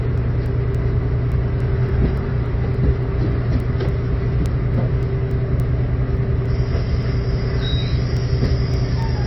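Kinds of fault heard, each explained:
MP3 compression: Likely lossy coding. Nothing above 5.8 kHz and plainly audible watery, swirling artefacts fit a low bitrate near 23 kbps. Unlike clock faults, this is continuous rather than ticking.
Word clock ticks: Sharp single-sample ticks repeat steadily about every 0.3 s from 0.18 to 9.02 s, around 30 in all. This fits unlocked clocks drifting apart by roughly 70 ppm, unlike random clicks.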